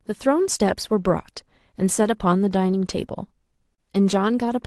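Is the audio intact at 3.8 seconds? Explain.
No. A short stall from a late packet sits at 3.75 to 3.81 s. A packet arrived late, the jitter buffer ran dry, and the receiver stretched the last bit of sound for about 31 ms until the packet arrived, then resumed exactly where it had stopped. Nothing is skipped, but playback falls about 31 ms behind, and the held sound is audible as a brief smear with a faint buzzy or dipping quality.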